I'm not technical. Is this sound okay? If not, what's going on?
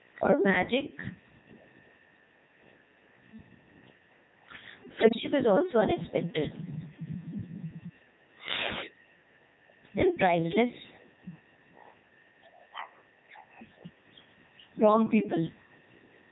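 No. The whole recording is affected by gain pumping: the level is pulled down on every loud sound, so loud and soft parts end up closer in level and the sound is squashed. The likely cause is the input turned up far too high, with an automatic limiter pulling it back down on every loud moment.

The speech also went through the Codec 2 vocoder, a very compact digital-radio system. Instead of sending the actual sound, it sends a rough description of pitch, loudness and tone, and rebuilds a voice from that, so the speech sounds heavily robotic and buzzy all the way through.

From 4.99 to 5.20 s there are bit errors on digital voice radio: corrupted data from a weak radio link. Because each piece of data controls a whole slice of the rebuilt voice, that moment breaks into warbling, jumping pitch and garbled bleeps.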